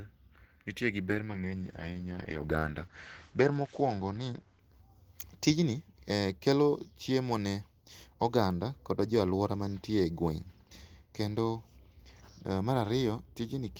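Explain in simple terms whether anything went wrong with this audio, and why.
Something did go wrong, early on. From 1.11 s to about 4.69 s the speech goes dull and rough. That is a call bitrate drop: the connection judged it had less room, so the encoder was told to squeeze the sound into far fewer bits. To cope, it coded everything more coarsely and dropped the upper range, cutting everything above 8 kHz. Once the connection recovered, the brighter, cleaner sound returned.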